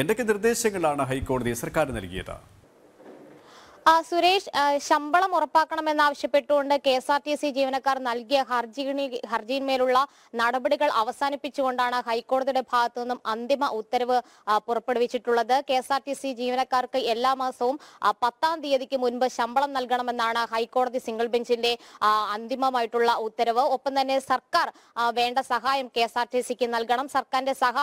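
Nothing in the recording stood out as a technical fault on listening.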